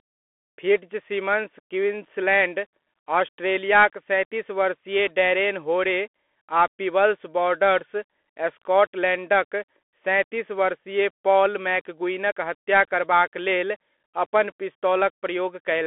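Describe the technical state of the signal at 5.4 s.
At 5.4 s the speech is passing through a Bluetooth CVSD headset codec, as it does for the whole clip. CVSD sends one bit per sample, saying only up or down, and adapts its step size. The rate heard fits a 64 kbps stream. The band is squeezed to roughly 250 Hz to 3.4 kHz, so the sound is thin and boxy. Fast, loud detail outruns the step and distorts. S sounds turn scratchy, and a granular hiss sits underneath.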